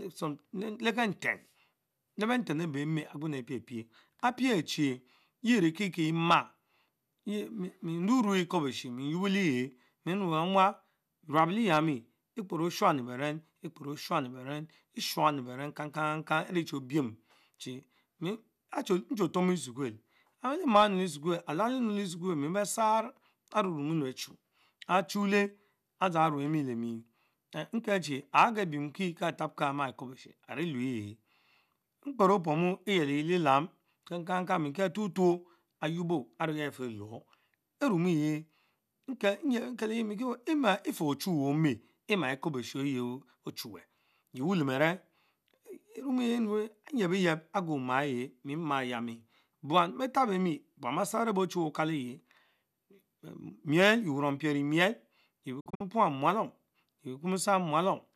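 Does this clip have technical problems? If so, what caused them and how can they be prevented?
Yes. A digital broadcast dropout runs from 55.60 to 55.81 s, just before "muralom yeh". Failed frames were muted in quick 8 ms fades, leaving several short holes. Together they lose 120 ms of speech, with the longest gap 48 ms. Stronger reception or more error correction would prevent it.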